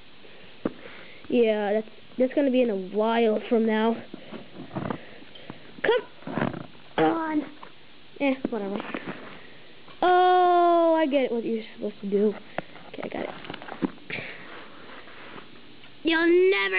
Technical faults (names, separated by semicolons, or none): none